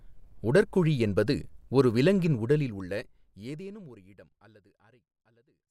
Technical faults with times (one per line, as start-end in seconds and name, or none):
none